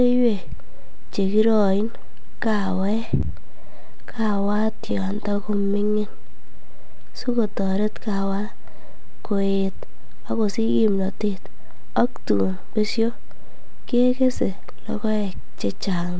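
From 2.92 s to 6.53 s, packets keep arriving late, and the jitter buffer repeatedly runs dry. These are repeated stalls (stutter). Each time, the receiver stretches the last stretch of speech until fresh audio arrives. This happens many times over the span, with waits no longer than 28 ms. Together they add about 0.8 s of filled-in sound, roughly a fifth of that stretch. No speech is lost, but the delivery keeps catching and dragging in small hiccups.

Overlapping the end of the stutter, from 5.91 s to 7.74 s, a jitter buffer slow-down sets in. With its reserve too low, the receiver rebuilds it by duplicating single pitch cycles and slivers of pauses over and over. This inserts 230 ms and plays the passage at 88% speed. The voice keeps its pitch but sounds drawn out and slightly sluggish.

From 9.41 s to 12.83 s the opposite happens: a jitter buffer speed-up. The buffer now holds more than it needs, so the receiver trims short pieces, one or a few pitch periods at a time, removing about 0.4 s overall. 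Speech runs at 112% speed at unchanged pitch and sounds noticeably hurried.

Throughout, nothing is heard above 8 kHz, which fits a wideband call codec such as G.722.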